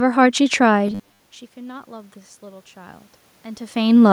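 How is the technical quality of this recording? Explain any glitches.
There are two glitches in this speech recording: a brief robotic patch and a slow gain swell.

From 0.88 to 1.20 s there's robotic sound from repeated short buffers: a rigid 100 Hz buzz, likely from about half the audio being replaced by repeats of roughly 10 ms buffers.

From 1.54 to 3.87 s the automatic gain rises. After the input dropped by about 24 dB, the gain control gradually added about 6 dB, lifting voice and room noise together.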